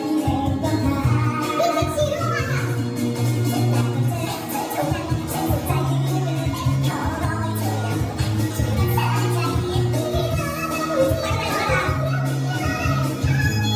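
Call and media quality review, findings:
Wrong sample rate, throughout the whole clip. Audio runs about 1.45x fast and sits about 6.5 semitones high, with speed and pitch shifted together. This fits material captured at 22 kHz being played out at 32 kHz with no resampling. Probable component: playback or render stage clocking the stream at the wrong rate, or a missing rate conversion between capture and output.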